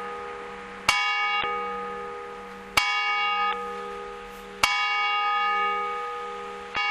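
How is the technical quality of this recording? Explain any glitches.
The recording has damaged data in a compressed stream in three places: 1.40 to 1.44 s, 3.49 to 3.53 s, and 6.73 to 6.78 s. Each lasts about 45 to 50 ms. At these points part of the encoded file was corrupted. The decoder could not read those frames properly. It lost sync and had to find the next valid frame header. Each one sounds like a short chirp, squawk, click or brief hole cutting across the sound.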